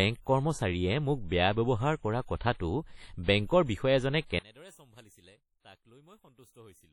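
Heavy codec damage runs through the whole speech clip: a ringing, washy texture with hiss that rises and falls with the signal, and nothing above 18.6 kHz. This is likely WMA compression at a low bitrate, around 32 kbps, where long transform blocks spread quantisation noise over tens of milliseconds and weak spectral lines are dropped.

Pre-echo appears twice, from 2.37 to 2.41 s (41 ms) and from 2.55 to 2.60 s (50 ms). In each case a short burst of hiss arrives just before a sharp attack. The codec's noise, sized for the loud onset, spreads back into the quiet stretch ahead of it within the same block, and the attack sounds smeared.

From 4.39 s to the end, the level drops by about 29 dB and only a faint residue of the sound remains, background included. The likely cause is one channel inverted: with one stereo channel's polarity reversed, the shared content cancels in the mono sum, leaving only the small difference between the channels.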